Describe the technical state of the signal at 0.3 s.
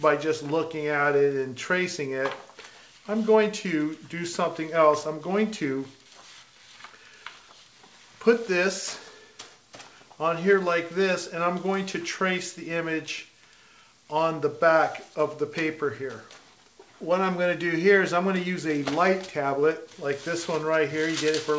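At 0.3 s the signal is intact, with no dropout, glitch or other fault, only the band limit of the call path, which leaves nothing above 8 kHz.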